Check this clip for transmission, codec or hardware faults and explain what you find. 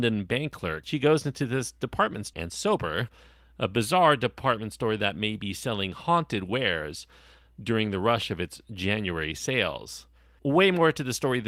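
Two transmission faults are audible, both in the early part of this speech.

At 2.33 to 2.35 s there is a skip ahead. About a second of audio was dropped, either in transit or by an overflowing jitter buffer, while later audio was already queued. Nothing fills the gap. Playback jumps forward, and the two sides are joined almost directly.

From 2.43 to 3.18 s there is a jitter buffer speed-up. The buffer held more audio than its target, so the receiver cut short pitch-period pieces repeatedly, about a tenth of a second in total. The speech runs at 111% speed with unchanged pitch and sounds hurried.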